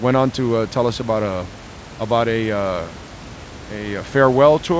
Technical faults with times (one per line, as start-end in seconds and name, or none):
none